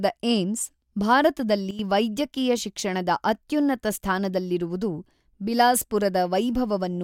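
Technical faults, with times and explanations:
1.71 to 1.79 s, sudden gain jump: the level drops by about 12 dB in a single step, with the speech and the background noise falling together, just before "ವೈದ್ಯಕೀಯ ಶಿಕ್ಷಣದ ಅತ್ಯುನ್ನತ ಸ್ಥಾನದಲ್ಲಿರುವುದು". It's likely a digital gain setting applied instantly rather than ramped in.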